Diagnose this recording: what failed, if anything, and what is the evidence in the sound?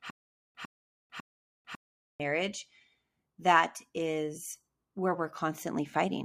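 Stutter with silent gaps from the start to 2.20 s: a 0.10 s burst repeats every 0.55 s, identical waveform blocks between flat silence, likely a stalled playback buffer.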